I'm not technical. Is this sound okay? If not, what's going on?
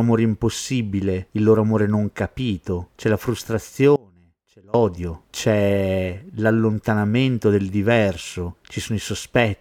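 No. From 3.96 to 4.74 s there's an audio dropout to a faint residue: the speech suddenly drops to a faint trace, likely a brief signal loss, returning at "c'è l'allontanamento del diverso".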